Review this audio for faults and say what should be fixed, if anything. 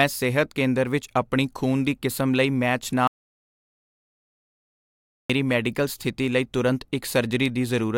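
Audio dropout to silence from 3.07 to 5.30 s: the speech cuts off mid-flow and about 2.2 s of silence follows, with no room tone, before it resumes. The input was likely lost, through a disconnected device, failed link or stray mute, while recording continued writing silence. Secure cables and connections, check mute states, and monitor input levels during recording.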